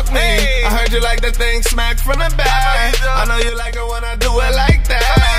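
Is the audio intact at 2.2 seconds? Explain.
Yes, the audio is intact at 2.2 seconds, with no dropout, click, distortion or other fault at that moment.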